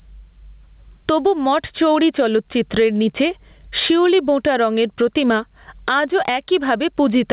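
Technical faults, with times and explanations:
Throughout, gain pumping: gain swings around 15 dB as loud syllables pull it down, squashing loud and soft parts closer in level, likely from overdriven input gain feeding a fast limiter.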